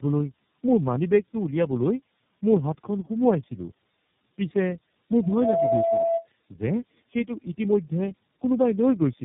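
From start to finish the speech carries tandem speech coding: the roughness and warble point to about three low-rate speech coders in a row, with the audio decoded and re-encoded at each link so every stage compounds the last one's errors. It sounds muffled, gritty and bubbling. On a spectrogram nothing appears above 3.4 kHz, harmonics look smeared and patchy, and the waveform shows blunted, noisy onsets.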